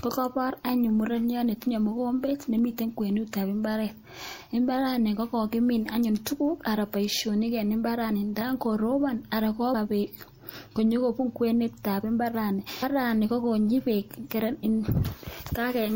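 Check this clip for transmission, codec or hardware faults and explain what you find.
The speech has one codec fault, compressed frames skipped, occurring three times. At 8.40 s, just before "koropon anan", about a fifth of a second is lost. At 9.73 s, right after "koropon anan", roughly 150 ms goes. At 12.82 s, between "kwenetab imbaarani" and "kokonyi beek", around 300 ms disappears. Whole compressed frames, each fitting a 26.1 ms frame length, never reach the output. Unlike a dropout, the sound leaps forward with no silent gap, and the overlapping frames leave a soft, smeared blip rather than a sharp click.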